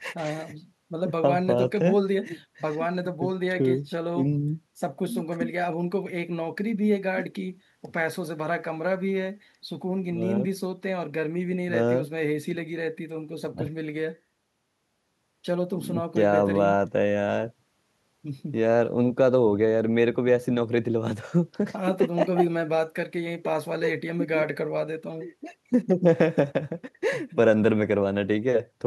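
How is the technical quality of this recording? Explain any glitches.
No technical glitches can be heard in this recording.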